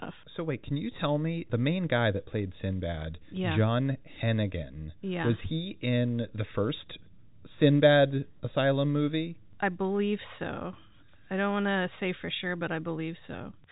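No faults found in the speech; the audio is limited to the telephone band by G.711 mu-law coding, with nothing above about 3.8 kHz.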